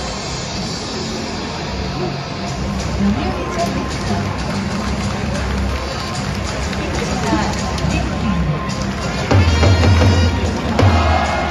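No technical faults are audible.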